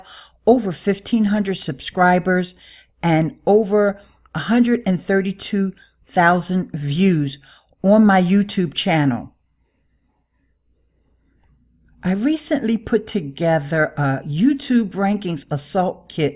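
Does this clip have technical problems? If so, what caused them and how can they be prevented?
No, nothing technical gets in the way here, so there's no cause to track down and nothing you need to do differently next time.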